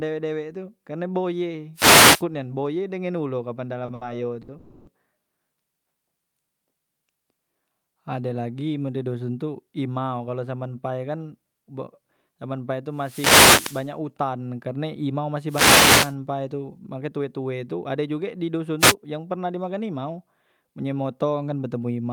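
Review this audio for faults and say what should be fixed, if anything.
Wireless microphone noise hits sound like short swishes of static over the speech at 1.74 to 2.24 s (just before "nian boye dengan ulo"), 12.94 to 13.93 s (just before "utan karne"), 15.47 to 16.15 s, and 18.79 to 18.95 s (just before "yang pernah di"). The analogue FM radio link is fading as reflected signals cancel the direct one, so receiver noise rises and covers the speech. To prevent this, use diversity receivers and keep clear line of sight between transmitter and receiver antennas.

Short stalls from late packets sound like brief holds where a sound lingers too long with a faint buzz. They occur at 3.85 to 3.90 s (about 30 ms stretched), 3.94 to 4.03 s (70 ms), and 4.42 to 4.50 s (60 ms). Each time, the jitter buffer ran dry and the receiver stretched the last sound until the late packet arrived. Nothing is lost, but the timing is pushed back. 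To prevent this, run a deeper or adaptive jitter buffer on a network path with steadier latency.

A call audio freeze follows at 4.58 to 4.89 s. The speech halts and is replaced by a fading buzzy continuation of the last sound for 290 ms, with no true silence, and then resumes where it left off. The likely cause is that a run of packets was held up in transit, so the jitter buffer emptied and the receiver filled the wait before continuing. Nothing is lost, but a gap is inserted. To prevent this, improve network stability and allow the jitter buffer more headroom for delay spikes.

A jitter buffer speed-up sounds hurried from 17.01 to 18.08 s. The speech runs at about 111% speed but keeps its normal pitch. The buffer had grown beyond its target depth, so the receiver cut many short pitch-period slices in quick succession, removing about 150 ms of audio to catch up. To prevent this, reduce the packet bunching that overfills the buffer, or let the buffer drain more gradually.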